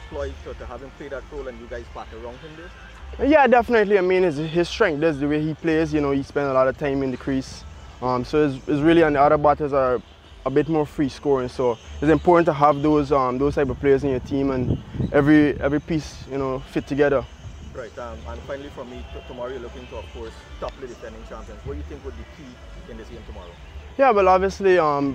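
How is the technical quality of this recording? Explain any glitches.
No glitches turn up anywhere in this recording. There is nothing to explain, as no dropouts, clicks or other disturbances interrupt the audio at any point.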